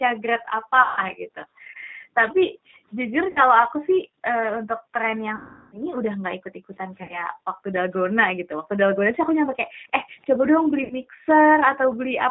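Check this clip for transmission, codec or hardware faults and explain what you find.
Four kinds of fault are audible in this speech clip.

The G.729 codec affects the whole clip, and the damage is plain. The sound fits 8 kbit/s G.729A. This codec does not send the waveform. It sends a vocal-tract filter, a pitch predictor and a few pulses per frame, and the decoder rebuilds speech from them. Nothing above 4 kHz survives. The voice sounds muffled, slightly rough and synthetic. The low bass cut from the call's microphone processing sits underneath this and is normal.

Background gated by the echo canceller occurs from 0.15 to 2.87 s and again from 7.32 to 12.17 s. The room sound drops by up to about 40 dB, for roughly a second and a half in the first span and about three seconds in the second. The echo canceller decided the far-end loudspeaker was active and pulled the microphone down hard. 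The background ducks out and then returns when the canceller releases.

VoIP packet loss concealed by the speech codec appears five times. The losses are 0.82 to 1.00 s (150 ms), 3.30 to 3.40 s (60 ms), 5.36 to 5.83 s (360 ms), 7.03 to 7.20 s (60 ms) and 10.84 to 10.95 s (60 ms). The gap sizes fit 30 ms packets. The decoder fills each gap by repeating its last pitch and filter with falling gain. The sound smears into a buzzy tone or coloured noise that fades. The long gap near 5.4 s lasts 360 ms. The voice stays weak briefly after each gap.

An echo leak is the likely cause of a faint delayed copy from 10.22 to 10.26 s. It arrives 309 ms after the original and sits around 40 dB below the speech. A far-end loudspeaker fed the microphone, and the canceller left a scrap uncancelled. That scrap was sent back. It is a very quiet, brief ghost of the voice.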